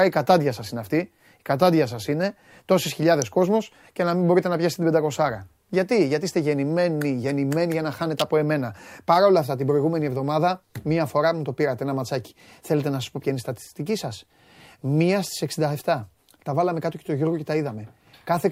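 At 3.22 s, after "κατάντια σα είναι τόσε", and from 8.19 to 8.22 s, after "γεννημένοι γεννημένοι για να", an electrical switching spike snaps sharply over the speech, peaking around -10 and -5 dBFS. These are likely arcs from nearby switching, added on top rather than gaps in the sound.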